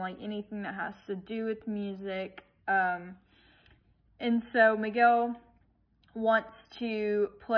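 No technical faults can be heard anywhere in the audio.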